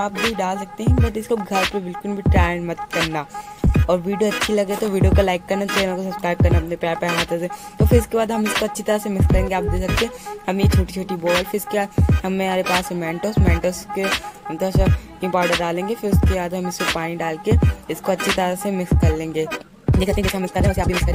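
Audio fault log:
19.45–21.14 s, time-stretched section: pace abruptly runs 2.0x faster at unchanged pitch, sounding rushed, likely from dropped short pieces. Spectrogram shows events squeezed closer with unchanged harmonic heights.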